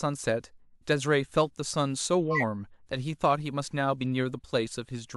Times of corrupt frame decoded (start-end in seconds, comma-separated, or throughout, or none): 2.31-2.42